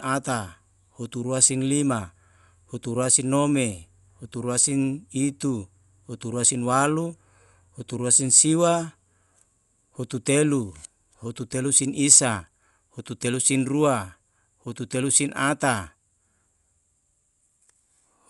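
From start to finish the speech sounds dull, with nothing above 11.5 kHz and a rough, fluttery hiss clinging to voiced sounds. That's likely Dolby Digital compression at a low rate, around 64 kbps, where the encoder narrows the band and the decoder fills starved lines with noise.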